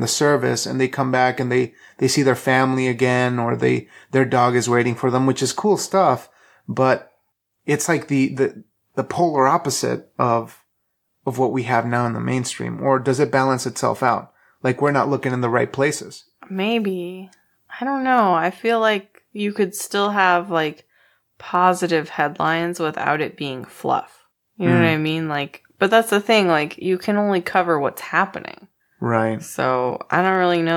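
Speech, with faint clock slip clicks running from 0.11 s right through to 30.74 s, a steady tick roughly every 40 ms that is clearest on louder passages. That's likely two unsynced clocks about 500 ppm apart, dropping or repeating a single sample each time.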